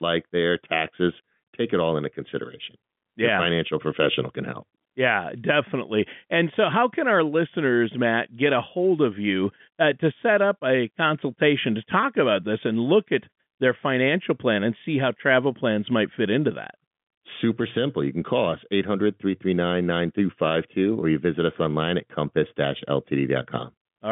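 Speech over a G.711 mu-law telephone line at 64 kbps, band-limited to roughly 150 Hz to 3.5 kHz with nothing above 3.7 kHz, and no technical faults to report.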